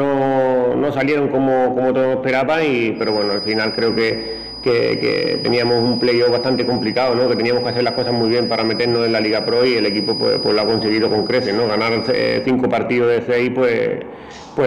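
From 2.93 s to 12.52 s a feedback whistle sits behind the sound: a thin, steady tone at 4.9 kHz, roughly ten decibels below the main signal, its level swelling and fading slowly. The likely cause is a loudspeaker-to-microphone loop held just at the edge of feedback, so one frequency keeps ringing without building into a howl. That slow swelling and the high, single pitch distinguish it from electrical interference, which holds a fixed level with harmonics.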